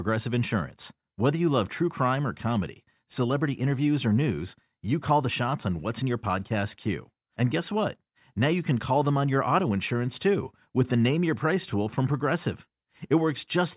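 No technical faults are audible.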